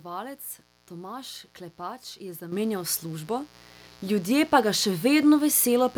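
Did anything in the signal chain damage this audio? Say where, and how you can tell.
Yes. The analogue wiring stage lets in mains buzz that runs through the whole clip. A steady, raspy 60 Hz buzz sits about 25 dB below the speech, and its harmonics reach well up into the kilohertz range instead of forming a clean low hum. That spiky spectrum points to switching spikes from a dimmer, rectifier or poorly shielded cable. They couple into the microphone line twice per mains cycle, ahead of any digital stage.

Call processing makes a microphone volume step-up at 2.52 s. The speech and the buzz underneath it jump together by about 9 dB in a single step, with no ramp. Because the background rises along with the speech, the change happened at the input rather than in the room. The call software judged the microphone too quiet and raised the device input volume in one increment.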